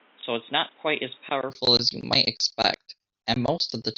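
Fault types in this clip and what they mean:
Input switched to a poorer device: From the start until 1.5 s, the speech is dull and boxy, with nothing above 3.8 kHz. It sits about 5 dB quieter, over a background noise roughly 30 dB below it. At 1.5 s, just before "as you might expect", the sound opens up abruptly with no gap. This is likely the recording input changing from a narrowband microphone or headset profile to a fuller one.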